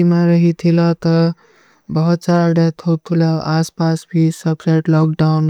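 Speech with hard clipping from 2.14 to 2.61 s, where peaks overdriven by about 2 dB are sliced flat, heard as crackle; the waveform shows squared-off tops and the spectrogram vertical high-frequency smears.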